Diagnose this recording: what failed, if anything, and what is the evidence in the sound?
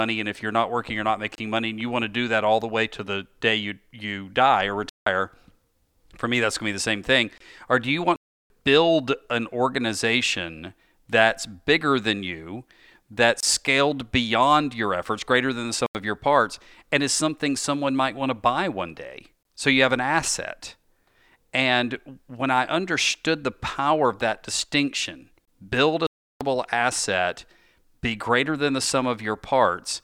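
Gap at a join of encoded pieces, at the codec stage: short holes of 24 to 29 ms at 1.35, 7.38, 13.40, 19.43 and 25.45 s (the last just after "power of that distinction"). They recur every 6 s, and their edges are smeared. Separately encoded 6 s segments were joined untrimmed, leaving encoder delay and end padding.

Block of digital silence, at the driver or buffer stage: the sound cuts to silence at 4.89 s (171 ms), 8.16 s (341 ms), 15.86 s (85 ms, between "efforts greater than the" and "of your parts and") and 26.07 s (341 ms). Unlike the join gaps, these are irregular, longer and hard-edged, and their lengths fit 4096-, 8192- and 16384-sample buffers left unfilled.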